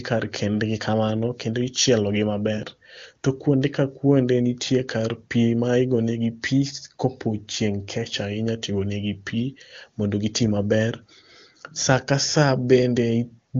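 Speech coded with an AMR wideband (HD Voice) codec, its content reaching up to about 7 kHz, with nothing technically wrong in it.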